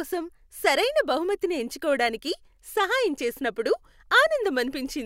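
No dropouts, glitches, clipping, pitch shifts or level jumps turn up anywhere in the recording.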